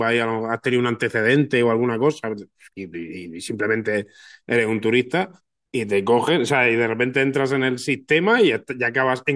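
No technical faults can be heard anywhere in this recording.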